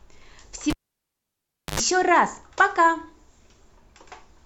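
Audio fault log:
0.70–1.80 s, cable pulled and plugged in: a pop cuts the speech to near silence for about 1.05 s, then an 89 ms burst of 50 Hz mains buzz and a second pop. A live lead was pulled and reinserted, and the buzz came while only its tip touched.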